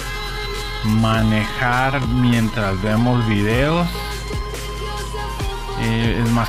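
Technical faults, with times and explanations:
0.00–4.14 s, time-stretched section: the sound runs at about 0.72 times normal pace with pitch unchanged, so it drags. Likely stretched in software by repeating short pieces.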